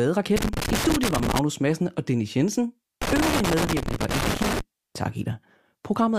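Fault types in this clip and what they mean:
Loose connector crackle: a worn contact making and breaking chops the speech into irregular scratchy bursts, heard from 0.36 to 1.39 s and 3.02 to 4.61 s.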